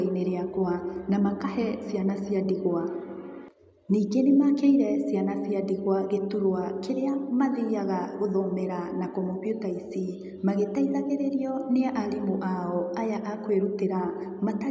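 No technical faults are audible in this speech.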